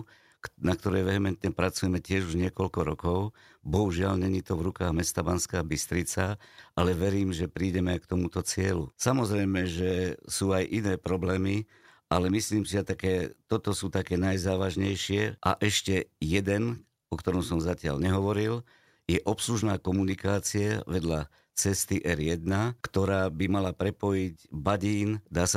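Nothing in this recording of someone talking stands out as a technical fault, so there's no timeline of problems to walk through here.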